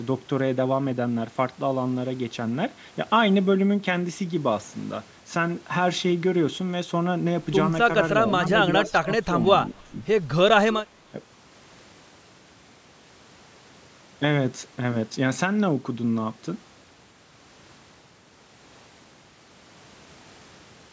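From 8.74 to 9.09 s the speech drops sharply, by as much as about 20 dB in places, and it dips again at 9.26 to 9.36 s, 9.69 to 9.97 s and 11.11 to 11.19 s, each time by about 15 dB. These are speech suppressed in double talk, likely caused by the far side talking at the same moment, so that the echo canceller could not tell this talker from loudspeaker echo and turned everything down. What sets these apart from echo is that nothing is added. The talker's own level collapses in short pieces.

At 8.85 to 8.89 s, inside the first dip, and again at 10.73 to 10.82 s, there is an echo leak. A faint, delayed copy of earlier sound comes through, at about 20 dB below the speech the first time and about 15 dB below it the second time. It trails by roughly 0.31 s, which likely means a loudspeaker on one end whose canceller let some of its microphone pickup through. Unlike the suppression, this is an extra ghost of the audio, not a loss of it. 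Throughout, the band stops at 8 kHz, which fits ordinary call microphone processing.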